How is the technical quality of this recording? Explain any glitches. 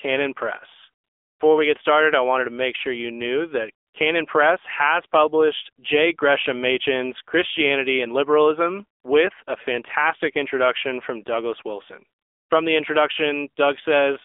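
The recording is narrowband mobile-phone speech with audible coding damage throughout and five brief patches where the real background is replaced by synthetic noise.

AMR narrowband mobile codec (whole clip): The voice sounds boxed-in, buzzy and synthetic. Nothing below about 300 Hz or above 3.5 kHz comes through, so it lacks both body and crispness. The buzz comes from the codec rebuilding speech from a vocal-tract model driven by a few sparse pulses per 5 ms subframe. The level of damage fits a low AMR-NB mode of around 7.4 kbps, where too few bits remain to capture natural detail.

AMR comfort noise (1.04–1.40 s, 3.86–3.94 s, 9.00–9.04 s, 9.44–9.46 s, 12.18–12.50 s): In these gaps the background changes to a smooth, even hiss that switches on and off. This happens after "sure you knew that" and just before "with a fantastic introduction" and "a fantastic introduction from". The phone judged the talker silent and stopped sending speech frames. 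The receiver then filled each gap with noise generated from a rough description of the background's level and spectrum, which is why the real room sound drops out.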